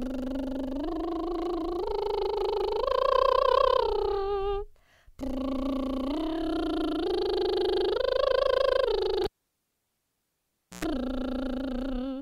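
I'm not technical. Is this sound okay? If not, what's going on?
No. The music has a cable pulled and plugged in. At 9.24 seconds there is a pop, and the music drops to near silence for about 1.6 seconds. A cable carrying the sound was pulled out while it was live. Then a short buzz, about 0.1 seconds long, sounds as the plug goes back in and only its tip touches. That hum comes from the 60 Hz mains power. A second pop follows, and the music returns at 10.85 seconds.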